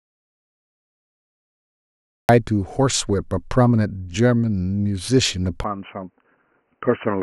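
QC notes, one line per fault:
0.00–2.29 s, audio dropout to silence: the clip opens in silence, already under way at the start, with no room tone at all. That points to the input likely being lost, through a disconnect or mute, while silence was still written, unlike a quiet room, which keeps a faint floor.
5.64–7.23 s, input switched to a poorer device: from 5.64 s to the end the sound turns dull and boxy with nothing above 3 kHz, drops roughly 5 dB and gains a new faint noise floor, with no gap at the change. That fits a likely switch to another input, such as a headset call profile. A plain filter would not shift the level and noise as well.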